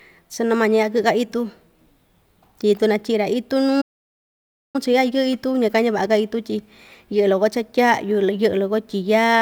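At 3.81 s the speech cuts to silence until 4.76 s, a playback stall of about 930 ms. The player likely ran out of data before resuming.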